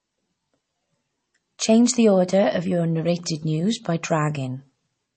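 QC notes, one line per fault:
Throughout, MP3 compression: the speech has a plainly audible watery, swirly quality, and nothing comes through above about 8.3 kHz. The encoder is clearly starved of bits, likely around 32 kbps, so it drops the treble and lets weak detail flicker between frames.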